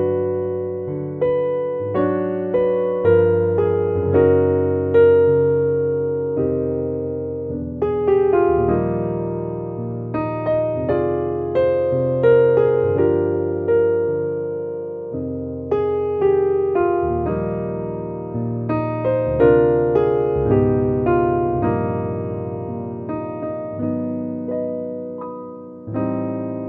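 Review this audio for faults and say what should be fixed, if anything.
MP2 compression damage runs through the whole clip: the top end sounds dull and clipped away, with a gurgling, granular texture in what remains. This is likely MPEG Layer II coding at too low a rate, which fits roughly 80 kbps. Starved of bits, the encoder drops upper sub-bands entirely, toggles others on and off between frames, and quantises the surviving bands coarsely. Keep an uncompressed master and encode only at delivery, at a substantially higher bitrate.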